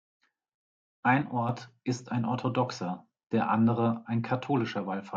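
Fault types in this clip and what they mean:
Sudden gain jump: the digital gain was likely switched from one sample to the next with no ramp, cutting it by about 5 dB. From 1.22 to 1.49 s, speech and background noise drop together abruptly, then recover just before "ist ein orthodoxer der".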